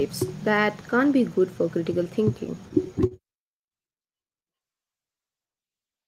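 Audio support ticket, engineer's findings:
Held sound at 3.07 to 3.14 s: speech briefly stretched with a faint buzz or dip, then resumes at the same place with nothing skipped. Short stall from a late packet. Jitter buffer ran dry, receiver extended the last audio by 41 ms until arrival. Playout runs 41 ms later afterwards.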